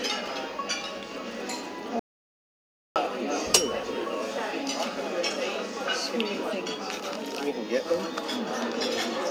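At 1.99 s the input signal was lost, most likely through a disconnected device, a broken link or a mute switched on by mistake, while recording carried on writing silence. The result is an audio dropout to silence: the sound cuts off abruptly and the gap is dead silence, with no background or room tone at all, until it returns just as suddenly at 2.96 s. Roughly 0.96 s of sound is simply gone.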